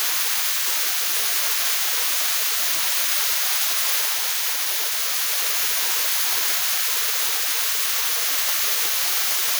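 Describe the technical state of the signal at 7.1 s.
Generation loss at 7.1 s, as throughout: likely repeated MP3 re-encoding, around seven passes near 128 kbit/s, stacking quantisation noise into swirly, hollow sound with smeared attacks.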